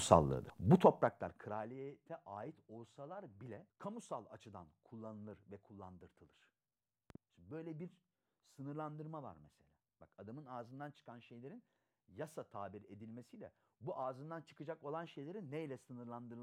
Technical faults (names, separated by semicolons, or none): zipper noise; loud pop